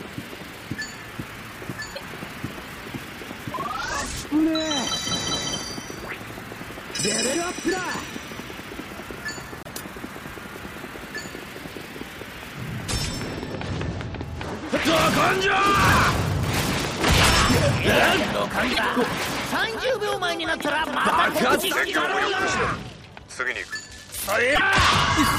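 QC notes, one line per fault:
1.95–2.02 s, 9.63–9.68 s, 18.72–18.79 s, 24.54–24.61 s: broken MP3 bit reservoir. The audio jumps ahead, then comes out as a brief chirp, noise burst or short hole lasting two to three 26.1 ms frames, likely because frames were dropped and the next frames read their borrowed reservoir bits from the wrong data.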